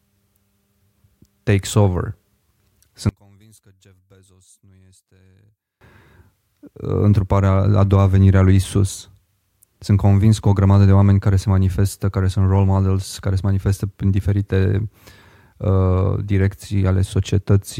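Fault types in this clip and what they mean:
One channel inverted: from 3.09 to 5.81 s the speech nearly vanishes, down about 36 dB, likely from one channel's polarity flipping and cancelling the other in mono.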